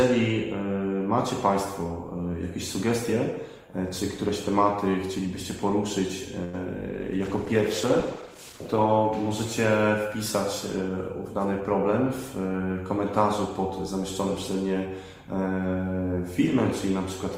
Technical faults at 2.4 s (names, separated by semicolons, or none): none